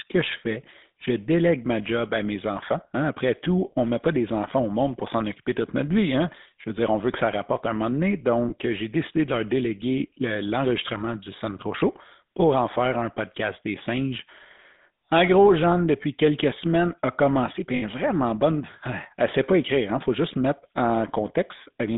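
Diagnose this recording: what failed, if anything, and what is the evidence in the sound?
The speech has a buzzy, gravelly roughness throughout, with the band held to about 200 Hz to 3.7 kHz. The cause is the GSM full-rate codec at the codec stage. At 13 kbps it rebuilds each voice from a vocal-tract model driven by sparse, evenly spaced pulses.

Two brief rough, metallic rings interrupt the speech. The first lasts about 20 ms at 8.48 s, between "rapporte un moment donné" and "j'ai décidé de leur". The second lasts about 60 ms from 17.76 s, after "semaines a commencé puis". These are lost GSM frames on the network path. The decoder repeats the last good frame's settings, and the lengths fit one and three 20 ms frames.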